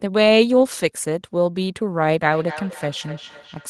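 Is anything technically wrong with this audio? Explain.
Yes. From 2.29 s to 3.69 s there is feedback echo between two devices: a second device replays the sound and the other microphone recaptures it, which that device's echo canceller cannot remove. Discrete repeats arrive roughly every 300 ms, at about 18 dB below the speech. A fixed spacing like this sets it apart from room reverberation's smooth tail.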